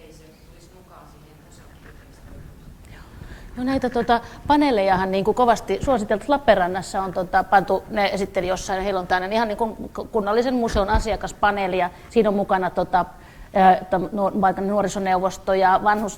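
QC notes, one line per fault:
No technical faults can be heard anywhere in the signal, so there is nothing to flag.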